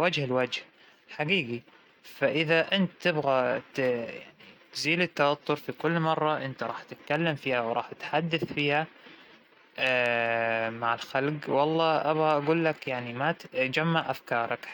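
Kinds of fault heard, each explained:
Corrupt frame decoded, 11.51 to 11.53 s: one damaged compressed frame of speech is played despite flipped bits, misplacing energy in frequency as a brief chirp, squeak, blip or burst of noise peaking around -25 dBFS.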